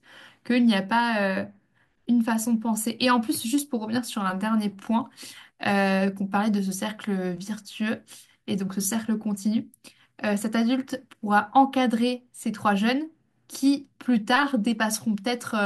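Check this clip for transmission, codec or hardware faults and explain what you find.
Nothing to flag here: I listened for transmission, codec and hardware trouble and didn't hear any faults in this speech recording.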